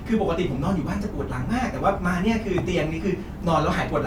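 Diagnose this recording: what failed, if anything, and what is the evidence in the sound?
Nothing in this speech recording points to a failure at any stage of the signal chain. There is no audible evidence of a fault to trace back to a cause.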